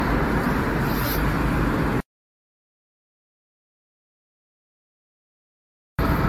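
Generation loss runs through the whole clip. The sound has a swirly, smeared, hollow character, harsher than a single encode at this quality would give. Transients are blurred, and nothing sounds above 18.6 kHz. This likely comes from repeated lossy transcoding: the texture points to around seven AAC-LC passes near 47 to 50 kbit/s. Each pass requantises on a shifted frame grid, so noise and spectral holes from earlier generations stack up instead of cancelling.

An audio dropout to silence runs from 2.00 s to 5.99 s, about 3.98 s in total. The sound cuts off mid-flow into complete silence, with no room tone or noise floor underneath. It then resumes abruptly. The silent gap suggests the input was lost while the recorder kept writing silence. A disconnected device, a failed link or an accidental mute could do this, and whatever happened during the gap is gone.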